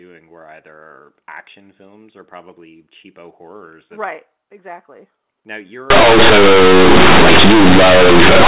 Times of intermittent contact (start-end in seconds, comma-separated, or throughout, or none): none